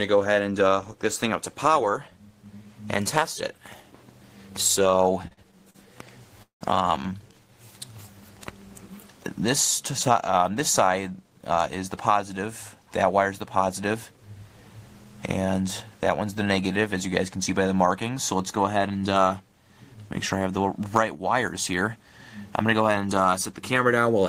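From 5.27 to 5.77 s you get repeated stalls, a stutter: four short hold-ups, the longest about 45 ms, where packets came in slower than they were being played out and the jitter buffer kept running dry. Each time the receiver just stretched the last bit of sound to cover, about 131 ms in total, roughly a quarter of that half-second. Nothing gets lost, but the passage drags and catches.

Then at 6.43 s there's a call audio freeze lasting to 6.63 s. The sound hangs, smears out and drops to silence for about 120 ms before picking up right where it left off. About 183 ms of gap gets pushed in, with nothing actually missing, and the whole stream ends up running that much later. The likely cause is packets held up in transit, leaving the jitter buffer empty while the receiver filled in.

After that the buffer is carrying more than it wants, so you hear jitter buffer speed-up in three stretches: 11.30 to 13.14 s at about 105% speed, 13.56 to 14.21 s at about 109%, and 21.96 to 23.11 s at about 108%. 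The receiver keeps snipping out tiny pitch-period-sized slices to shed delay, around a tenth of a second in the first and last stretches and a bit less in the middle one. The pitch stays put, but the audio sounds noticeably hurried there.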